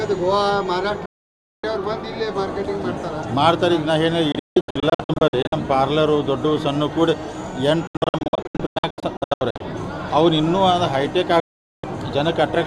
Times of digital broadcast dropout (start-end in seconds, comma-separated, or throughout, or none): 1.05-1.64, 4.32-5.53, 7.87-9.61, 11.40-11.84